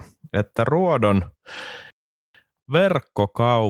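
At 1.53 to 1.59 s lost packets were rebuilt from error correction. The missing stretch, about 40 ms and consistent with two 20 ms packets, was filled from the low-bitrate copy carried in the following packet, so there is no gap. The speech turns briefly rougher and grainier there. A waveform shows no dropout, but a spectrogram shows a short smeared patch with blurred harmonics and more diffuse noise between them.

From 1.91 to 2.35 s there is a playback stall. The speech cuts off mid-flow and the output stays silent for 440 ms before it resumes. The likely cause is that the player ran out of buffered data and could not continue until more arrived. On a waveform this is a flat, near-silent line, and on a spectrogram it is an empty vertical band with abrupt edges on both sides.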